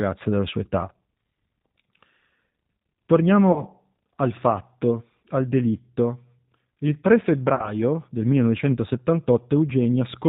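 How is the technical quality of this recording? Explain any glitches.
The technical quality is limited by low-bitrate telephone coding throughout, with two short glitches where the codec covered for missing audio.

Across the whole recording, the speech has the rough, slightly synthetic texture of the G.729 codec, which fits an 8 kbit/s rate. The codec rebuilds each 10 ms frame from a vocal tract model, a pitch predictor and a few pulses, so nothing above 4 kHz survives. The modelled buzziness sets it apart from a simple low-pass filter.

From 3.52 to 3.65 s and again from 7.55 to 7.72 s, VoIP packet loss concealed by the speech codec stretches the sound into a fading buzzy tone or coloured noise. About 40 ms went missing each time, which fits two lost packets. The decoder extrapolated from its last pitch and filter, and the voice stays weakened briefly afterwards. A plain dropout would leave silence rather than this smeared, decaying sound.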